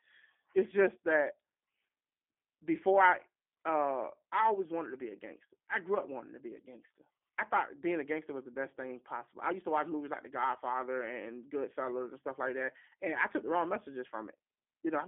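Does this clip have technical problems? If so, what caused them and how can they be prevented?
Yes. G.729 codec damage runs throughout the speech: nothing passes above 3.4 kHz or below about 250 Hz, and the rebuilt voice sounds rough and synthetic, which fits an 8 kbit/s G.729A coder reconstructing each 10 ms frame from a vocal tract filter, a pitch predictor and a few pulses. To prevent it, record locally or negotiate a wideband codec such as Opus or G.722.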